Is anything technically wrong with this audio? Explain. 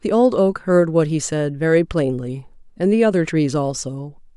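No, nothing is technically wrong with this audio.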